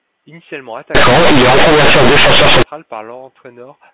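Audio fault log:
0.95–2.63 s, companded audio read as linear: the mu-law telephone bytes play as plain linear 8-bit values with no expansion, so each sign change swings across about half the range. Quiet speech becomes as loud as loud speech, giving harsh, buzzy distortion and heavy noise in pauses.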